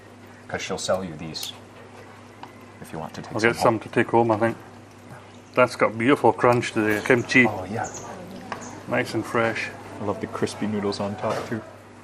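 Across the whole clip the sound is dull and granular, with upper bands flickering in and out, likely MP2 compression at a rate fitting about 80 kbps, too few bits for the high sub-bands. DAB burbling at 8.37–8.49 s produces a brief burst of noise blips, as bit errors slipping past error correction make single sub-bands jump in level over a handful of frames.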